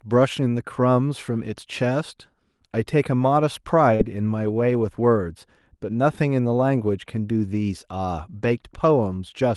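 Speech over a WebRTC-style call path whose Opus coding caps the top end near 12 kHz. From 3.95 to 4.02 s, short concealed packet loss leaves about 40 ms missing; the decoder extends the preceding sound, producing a brief smeared wobble.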